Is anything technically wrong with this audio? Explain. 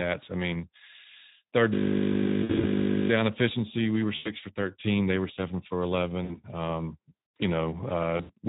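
Yes, there are three kinds of fault.

Speex codec, throughout: the speech was encoded with Speex at about 11 kbps, leaving the CELP coder few bits to describe the excitation. The result is plainly audible damage, with a noisy, hoarse edge on the speech from start to finish.

System hang loop, 1.74 to 3.10 s: the system stalled while the audio hardware kept replaying one 20 ms stretch of its ring buffer. That single fragment repeats exactly at 50 Hz for the whole span, so the speech is replaced by a steady buzz.

VoIP packet loss concealed by the speech codec, at 2.43 to 2.65 s (just before "down efficiency we were"), 4.15 to 4.31 s, 6.23 to 6.40 s (just after "they were seven for") and 8.17 to 8.32 s (just before "we had"): packets went missing, 60 to 120 ms of audio each time, and the decoder extrapolated from its last pitch and filter state while lowering the gain. Each gap sounds like a stretched, buzzy tone or coloured noise fading away, and the speech stays weak and smeared briefly afterwards.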